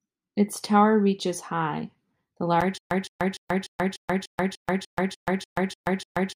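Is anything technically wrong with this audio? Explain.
Yes. From 2.78 s to the end, just after "tower reaches high the", a stutter with silent gaps sets in: a 171 ms burst of speech repeats twelve times, each followed by 125 ms of dead silence, every 296 ms. The likely cause is a stalled stream replaying its last fragment at each retry, so the speech after this point never plays.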